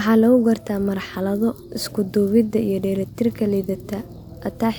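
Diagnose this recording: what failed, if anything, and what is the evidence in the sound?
Nothing failed in this recording, and no stage of the chain leaves an audible trace of a fault in the speech. With no evidence to point to, there is no wiring, conversion, processing, transmission or playback problem to diagnose.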